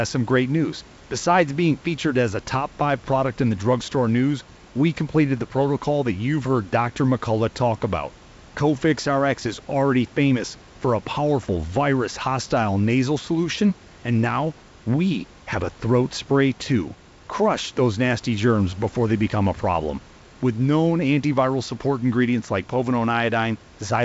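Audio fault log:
No fault is present: the speech sits about 26 dB above the room's background noise, and the G.722 wideband telephone coding at 64 kbit/s carries it with its content ending at 7.7 kHz.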